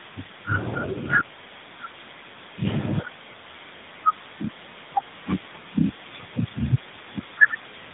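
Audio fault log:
Throughout, tandem speech coding. Two speech coders in turn each recoded the last one's damage. Speech sounds rough, muffled and warbly, with nothing above 3.8 kHz.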